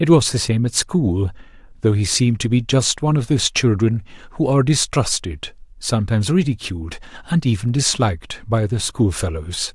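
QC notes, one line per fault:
No faults were heard anywhere in the clip. There is nothing to log for this speech recording.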